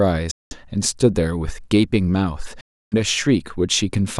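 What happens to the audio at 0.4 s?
At 0.4 s the speech cuts out completely in what sounds like a Bluetooth dropout, a silent gap from 0.31 s to 0.55 s. The likely cause is audio packets arriving too late at the headphones and being discarded, so speech resumes further along.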